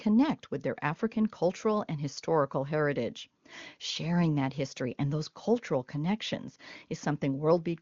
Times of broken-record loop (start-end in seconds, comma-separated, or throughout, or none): none